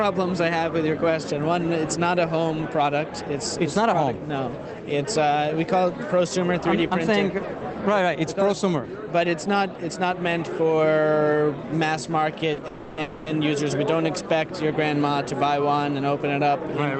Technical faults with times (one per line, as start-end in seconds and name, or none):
12.53-12.59 short stall from a late packet
12.67-13.28 call audio freeze